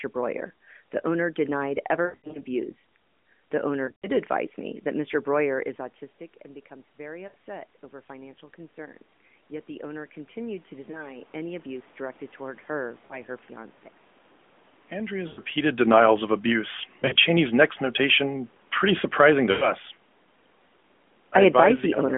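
Lost AMR speech frames show up eight times: 2.06–2.41 s right after "owner denied", 3.86–4.07 s just before "advise me that", then 7.28–7.34, 10.92–11.16, 13.06–13.22, 15.28–15.40, 17.00–17.19 and 19.52–19.69 s. Each time the decoder bridged the missing audio by replaying its last good pitch and vocal-tract settings at falling gain. The first is the longest, about 200 ms of patched sound spread over 280 ms, heard as a smeared, warbling stretch. The shorter ones are quick dips or brief drawn-out blurs.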